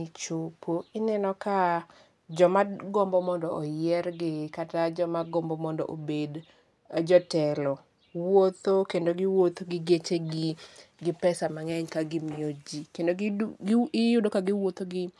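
Nothing in this recording of speech stands out as a technical fault, so there's no problem to point to anywhere along the way.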